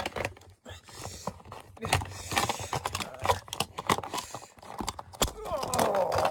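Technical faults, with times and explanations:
Throughout, sample clock jitter: sample timing wobbles by around 7 microseconds, so loud, fast-moving high sounds pick up hiss or roughness about 20 dB below the signal.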